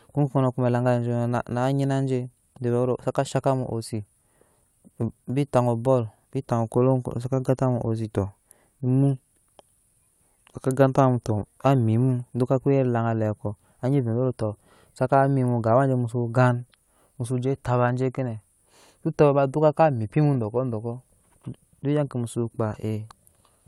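No technical faults can be heard anywhere in the recording.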